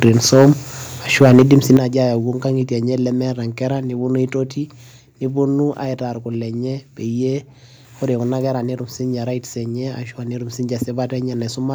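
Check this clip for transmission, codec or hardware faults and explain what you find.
Two hardware-side faults show up in the speech, both in the first two seconds.

Microphone overload, 0.02 to 0.5 s and 1.21 to 1.77 s: the peaks sit about 6 dB above full scale and are flattened. This is likely from input volume set too high for the converter. A few percent of samples are clipped in the first stretch and several percent in the second, giving a harsh crackle on the loudest syllables.

Microphone volume stepped down, at 0.09 s and 1.77 s: the speech and its background drop abruptly, by about 3 dB and then about 9 dB. This is likely the call software cutting the device's input gain in one step after detecting clipping. The second, larger drop lands right as the overload ends.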